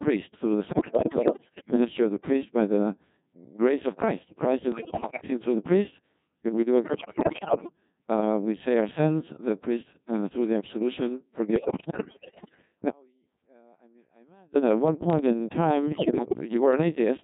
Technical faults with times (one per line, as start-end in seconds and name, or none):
0.00-17.23 Codec 2 vocoder
0.72-1.75 bit errors on digital voice radio
4.72-5.30 bit errors on digital voice radio
6.84-7.72 bit errors on digital voice radio
11.56-12.62 bit errors on digital voice radio
15.92-16.35 bit errors on digital voice radio